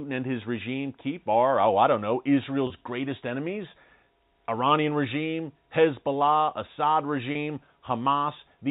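At 2.67 to 2.70 s and again at 7.32 to 7.35 s, the speech briefly holds a slightly buzzy, frozen tone for about 30 ms. This is packet loss with pitch repetition: a gap that fits a single lost packet was filled by looping the last pitch period. Unlike a plain dropout, there is no silence or click. The repeated cycle gives a short sustained buzz instead, heard over the 4 kHz-limited G.711 telephone band.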